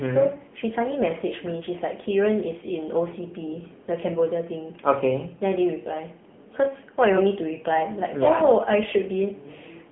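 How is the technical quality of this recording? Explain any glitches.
Pretty rough, honestly: the whole clip has gone through the AMR narrowband mobile codec. Across all of it, nothing survives above about 3.7 kHz or below roughly 150 Hz, and the vocal-tract model with sparse pulses leaves the speech plainly buzzy and synthetic, which fits a low bitrate of around 8 kbps.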